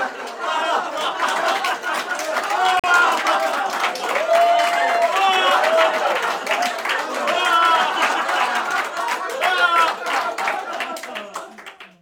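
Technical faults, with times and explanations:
2.80–2.88 s, digital broadcast dropout: the sound cuts to silence for just under a tenth of a second, then resumes further along. The receiver rejected corrupted data, most plausibly a frame that failed its checksum, and muted rather than decode garbage, waiting until valid frames arrived again. About 43 ms of the transmitted sound is gone, consistent with a single lost frame, so the return lands slightly later in the audio than where it broke off.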